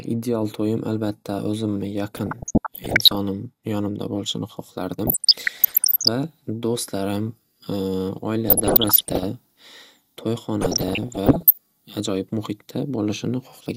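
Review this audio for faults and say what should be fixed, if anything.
Weak DAB reception let bit errors slip past error correction into the MP2 data. Corrupted samples put short blips of noise in single sub-bands, heard as DAB burbling. It occurs at 2.17–3.16 s after "to'yim albatta o'zimni", at 5.07–6.08 s between "yonimda bo'lishini" and "va do'stlarim", at 8.49–9.23 s and at 10.61–11.58 s. A stronger received signal, through better antenna placement or a better receiver, would prevent it.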